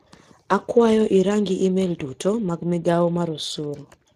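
A speech clip carrying plainly audible Speex codec damage throughout: hoarse, noisy texture consistent with roughly 22 kbps coding, and a spectrogram showing nothing above 15.2 kHz.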